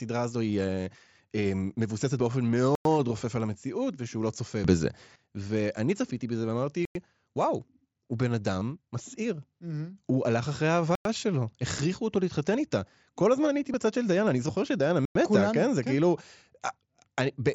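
The speech was delivered in 4-second chunks with a gap between chunks, so playback pauses for 100 ms at each join: at 2.75, 6.85, 10.95 and 15.05 s. Nothing is lost, but each join leaves a hard-edged hole in the sound, spaced evenly through the clip.

From 4.64 to 5.16 s the level leaps up by about 12 dB and then drops back, with the background noise rising and falling in step. This is a sudden gain jump, likely a digital gain setting applied without a ramp, so both edges are abrupt rather than smoothed.

Concealed Bluetooth headset packet loss follows at 8.60 s and again at 13.73 s. Headset packets went missing, and the receiver covered each loss by repeating a best-matching piece of the preceding waveform. The first patch lasts about 15 ms and the second about 7.5 ms. The wideband mSBC headset link carrying the speech can be heard in its 8 kHz top end.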